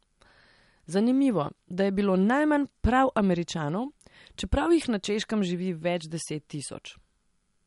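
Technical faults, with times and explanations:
Throughout, MP3 compression: the speech has a watery, swirling quality, with s sounds turned chirpy and metallic, likely from a low bitrate around 48 kbps starving the encoder so weak frequency lines drop in and out between frames.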